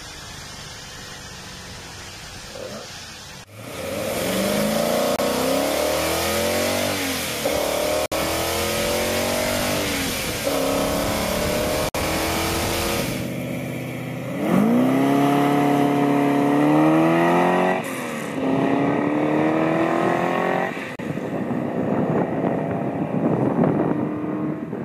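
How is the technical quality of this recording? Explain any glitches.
The recording has four brief dropouts, at 5.16 s (27 ms), 8.06 s (58 ms), 11.89 s (57 ms) and 20.96 s (33 ms). Each is likely a Bluetooth stall: delayed packets starved the receiver's buffer, so the audio cuts to silence before continuing.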